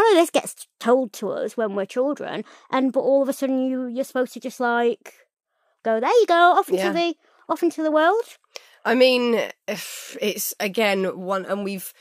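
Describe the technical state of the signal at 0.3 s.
At 0.3 s the signal is intact, with no dropout, distortion, clipping or other fault audible at that point in the speech.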